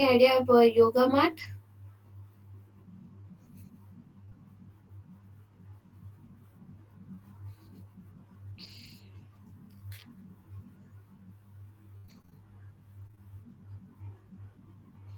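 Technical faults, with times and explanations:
Throughout: channel delay (comb filtering). One channel runs about 20 ms behind the other, and the two are summed to mono. Content shared by both cancels at regularly spaced frequencies, starting around 20 Hz, which gives the speech a rough, slightly doubled sound. On a spectrogram this shows as fixed horizontal notch stripes at even intervals for the whole clip. The waveform looks normal, because the cancellation is spread across the spectrum rather than appearing as amplitude drops.
1.39–4.33 s: scattered short gaps. Just after "idea about yoga", about three small holes are spread through this stretch. The longest is around 20 ms, with roughly 50 ms patched in total, about 2% of the span. Some lost audio came back through error-correction copies, and the rest was concealed by extending the previous sound. The result is brief ticks or smears, while the speech stays clear. 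A spectrogram shows thin vertical smudges where the harmonic detail briefly freezes.
7.15–7.19 s: short concealed packet loss. About 20 ms of audio never arrived. The decoder filled 22 ms by continuing the last sound and then crossfaded back into the real signal, which gives a quick smear or wobble in the speech. On a spectrogram the harmonics go blurred and flat for that instant. The waveform shows a short, overly regular stretch, or a slight envelope bump where the fill blends back in.
8.63–8.93 s: lost packet rebuilt from error correction. Packets were lost across this span, and 160 ms was rebuilt from the low-bitrate copies carried in the following packets, which fits eight 20 ms packets. Because of this there is no audible gap. The rebuilt frames sound rougher and noisier than the speech around them. On a spectrogram they appear as coarser, grainier patches with less fine harmonic structure, while the waveform envelope stays continuous.
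11.97–13.19 s: repeated packet loss (robotic sound). Eight holes come in quick succession, the longest about 60 ms. Roughly 200 ms is missing, with 195 ms concealed by extrapolation and about 100 ms recovered from error correction, so some 16% of the span is concealed. Each patch repeats the last pitch period before the next hole arrives, which makes the speech choppy. A spectrogram shows frozen, buzzy harmonic segments alternating with real speech, and the waveform shows repetitive cycles.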